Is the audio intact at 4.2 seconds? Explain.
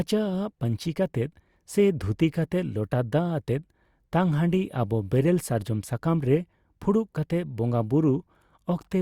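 Yes, the speech at 4.2 seconds plays through intact, with no fault audible at that moment.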